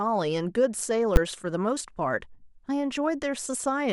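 A speech clip with one fault: invalid numbers at full scale, at 1.16 s. A processing step produced infinite or invalid values there. They became the largest positive or negative value. The output then held flat at one extreme value, far beyond the speech peaks, for a block of about 10 ms. That block is too short to hear a separate pop at each edge. It lands as a single hard bang.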